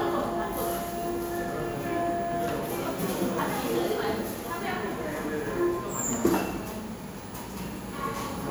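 Nothing goes wrong anywhere in this recording of sounds, so there's no technical fault to point out.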